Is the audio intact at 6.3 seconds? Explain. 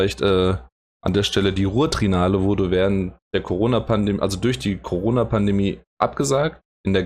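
No. At 6.3 seconds, as throughout the clip, the speech carries damage from likely MP2 compression at a low rate, which fits a bitrate of about 80 kbps. The encoder divides the sound into 32 equal sub-bands and runs short of bits, so upper bands are switched off and flicker in and out while the remaining bands are coarsely quantised. The speech sounds dull, with a plainly audible gurgling, granular roughness.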